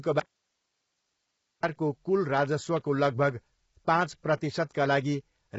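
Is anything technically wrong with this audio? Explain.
Yes. From 0.20 to 1.63 s the speech cuts out abruptly for about 1.4 s, leaving only faint hiss far below speech level. This is an audio dropout to a faint residue, likely a lost signal on a still-live path.

Throughout, the speech sounds rough and grainy, with nothing above 7.7 kHz. This points to heavy low-delay AAC compression, likely AAC-ELD at around 16 kbps, whose short frames resolve harmonics poorly.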